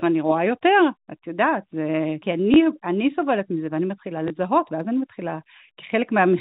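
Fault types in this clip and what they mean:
Packet loss with last packet repeated: 20 ms of audio went missing twice, and the receiver filled each gap by replaying the preceding packet. At 2.54 s and 4.28 s the speech gives a small blip.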